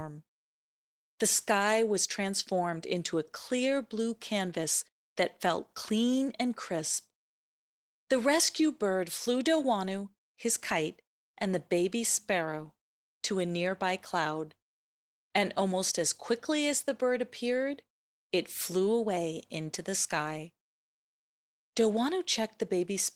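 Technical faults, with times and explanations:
throughout: clock drift between sender and receiver. The sending clock runs roughly 1.5 percent slower than the receiving one, so the jitter buffer keeps draining and the receiver has to pad the stream by repeating short slices of sound. The hiccups recur irregularly across the whole clip. On a waveform, some syllable shapes appear duplicated at their seams. On a spectrogram, harmonic tracks show small stutters and slightly stretched segments scattered unevenly.
0.12 to 22.94 s: repeated timing corrections. Throughout this span the receiver keeps inserting repeated fragments. The net effect plays the speech at about 98 percent of its natural pace and adds roughly 0.4 s in total. Every edit goes the same way, lengthening the audio, but the edits are unevenly spaced. A waveform shows brief duplicated cycles at splice points. A spectrogram shows tiny vertical discontinuities where formant contours restart.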